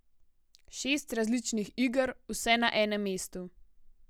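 From 0.13 s to 4.05 s the speech carries a faint, soft rattle of tiny ticks, some fifty in all, arriving roughly every 70 ms. They are clock slip clicks, most audible on louder sustained sounds and absent in the pauses. The likely cause is two devices running on unsynchronised clocks that differ by a few hundred ppm, so a single sample is dropped or repeated each time the drift adds up to one whole sample.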